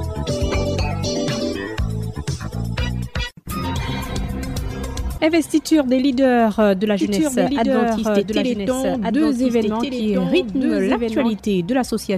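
From 7.00 to 11.40 s a doubled audio track appears: a second full-band copy of the sound trails about one and a half seconds behind, a few decibels quieter, likely from a slower capture path. Unlike an echo, it has no decay or room colour and cuts in and out abruptly.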